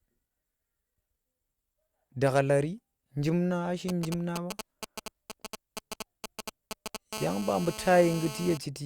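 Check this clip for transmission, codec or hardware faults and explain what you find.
Two radio interference faults from a nearby 2G phone appear later in this speech clip.

From 3.89 to 6.97 s there are GSM signalling bursts. The phone is not in a call. It sends short groups of radio pulses, as it does before a call or a text arrives. The audio circuit rectifies those pulses into sound. The result is a galloping dit-dit-dit of short buzzes at 217 Hz. They sit only a few decibels below the speech.

From 7.13 to 8.58 s a GSM phone buzz takes over. The phone is now in a call and transmits in bursts, 217 bursts every second. Each burst is rectified in the audio path, giving a hard, raspy 217 Hz tone with many harmonics. It has no relation to the speech. It is nearly steady, at about 13 dB below the speech.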